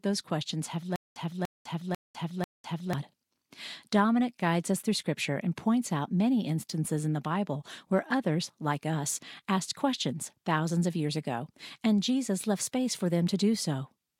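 The stream likely stalled from 0.96 to 2.93 s, causing stutter with silent gaps: a 292 ms fragment of speech replays four times, each followed by 202 ms of digital silence.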